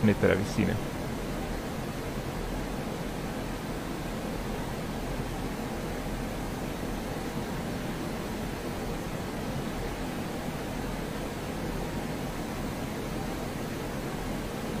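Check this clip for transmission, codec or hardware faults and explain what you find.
One fault is present. At 9.43 s there is a block of digital silence of about 0.73 ms, which fits a 32-sample buffer left unfilled. The abrupt cut to zero and back is heard as a single tick.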